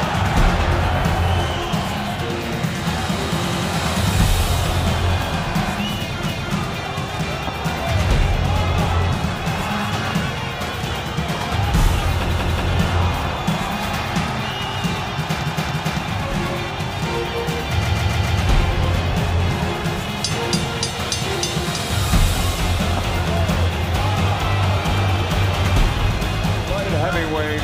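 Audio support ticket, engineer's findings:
Repeated frames at 3.46, 6.25, 12.29, 15.40 and 17.81 s: stutters where 93–279 ms blocks replay up to four times. Compressed frames duplicated in the write or transport path, lengthening playback.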